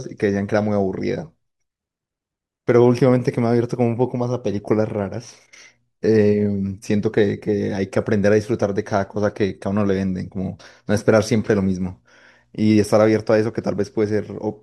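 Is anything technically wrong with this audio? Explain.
No, nothing technically wrong here.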